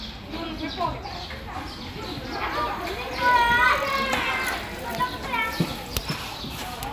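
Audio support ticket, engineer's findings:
Listened in full: no faults heard, nothing to report.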